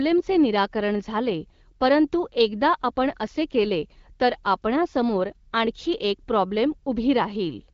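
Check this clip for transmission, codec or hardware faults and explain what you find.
No transmission, codec or hardware faults are present.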